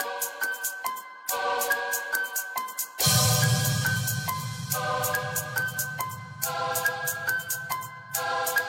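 Nothing is technically wrong with this clip.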